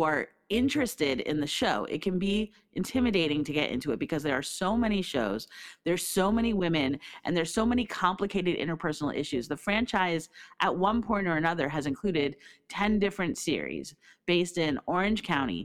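From start to finish the speech carries overlap-add ripple. The signal was evidently processed in short windowed frames and rejoined with an overlap whose window gains do not add up to a flat total, so the level dips and swells once per frame. Here that modulation runs at around 150 Hz with a depth of about 6 dB. It is heard as a metallic buzz riding on the speech, with extra tones around each sound.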